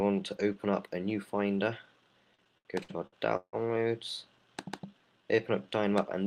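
From 2.35 to 3.56 s the sound hits repeated stalls (stutter): late-arriving packets drained the jitter buffer six times, and the receiver stretched the last sound to cover about 395 ms, a third of that span. The longest stall is 164 ms. On a spectrogram these show as smeared, frozen bands, fading in the longest gap.

From 4.86 to 5.68 s a jitter buffer slow-down adds 125 ms, so playback runs at 86% speed with unchanged pitch. Single pitch periods were repeated to rebuild the buffer, giving drawn-out sounds. The waveform shows near-identical cycles copied in runs, and harmonics stay level while stretching horizontally.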